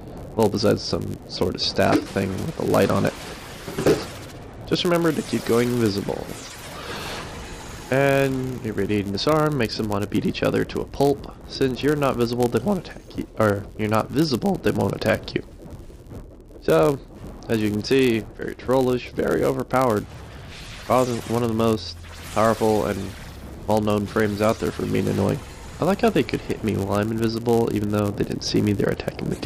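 Throughout the clip, a block size mismatch (padded) leaves one stage writing slightly shorter blocks than the next reads, with each shortfall filled by silence. These tiny gaps repeat at 91.5 Hz, producing a steady buzz, while the audio plays about 0.4 percent slow with its timbre intact.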